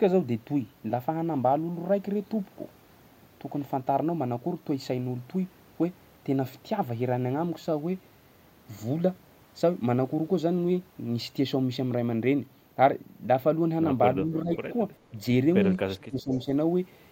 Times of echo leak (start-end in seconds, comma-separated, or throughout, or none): 14.53-14.57, 16.20-16.44